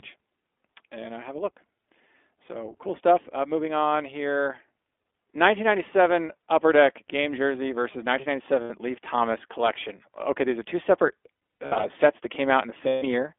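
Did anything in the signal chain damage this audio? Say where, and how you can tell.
Yes, at the codec stage the whole clip has been through iLBC. The speech sits in a narrow band, roughly 300 Hz to 3.5 kHz, with a slightly rough, synthetic edge throughout. That fits iLBC's 15.2 kbps mode coding each 20 ms frame independently.

At the network stage there are lost iLBC frames, where the decoder fills the gaps with a held, buzzy repeat. You can hear it around 8.62 to 8.71 s, between "these are two separate" and "sets that" at 11.66 to 11.86 s (spread over about half a second, longest run around 100 ms), and after "sets that" at 12.88 to 13.04 s. Each time, the speech recovers almost immediately.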